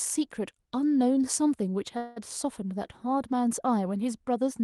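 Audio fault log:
1.97–2.18 s, call audio freeze: the speech stops moving forward for about 0.21 s and a buzzy or hissy continuation of the last sound fills the hole, thinning as it goes but never dropping to silence. When it ends, the speech picks up exactly where it left off with nothing skipped, only pushed later. That pattern points to a likely packet delay that drained the jitter buffer, with the receiver stretching the final fragment until audio arrived, on a call path whose high end stops near 12 kHz.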